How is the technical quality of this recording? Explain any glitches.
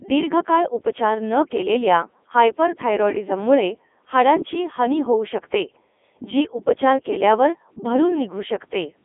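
Pretty rough, honestly; the whole 9 seconds of speech has gone through a Codec 2 vocoder. The decoder rebuilds the voice from sine waves using only pitch, voicing, energy and a spectral envelope, so the original waveform is gone. That gives heavy damage: buzzy, robotic speech squeezed into a 250 Hz to 3.5 kHz band. It sounds like Codec 2's top 3.2 kbit/s mode.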